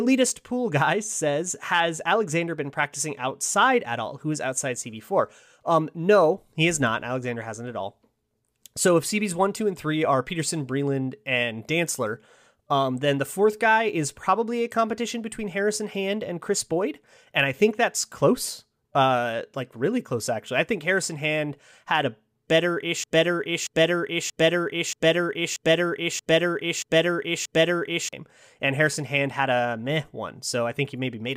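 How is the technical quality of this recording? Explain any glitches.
One glitch affects the recording. From 23.04 to 28.13 s, a broken-record loop repeats a 0.63 s fragment of speech eight times back to back, likely from a playback or stream stall. The speech that belonged there is missing.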